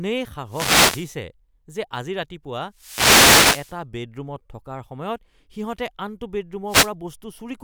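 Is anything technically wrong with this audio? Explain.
Yes. Wireless microphone noise hits break through the speech at 0.45 to 1.12 s, 2.72 to 3.80 s and 6.66 to 6.92 s. As the FM radio signal fades from reflections cancelling, receiver noise swells into a hissy swish. Each burst appears as broadband vertical smearing on a spectrogram and a fuzzy thickening of the waveform.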